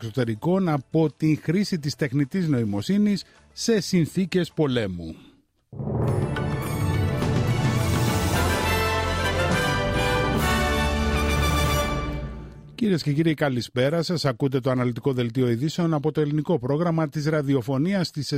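No audible technical faults.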